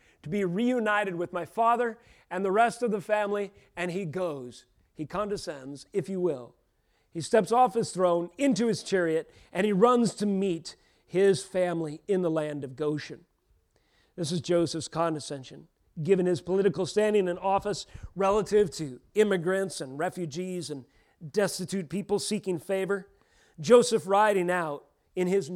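Speech recording, no technical faults detected anywhere in the audio.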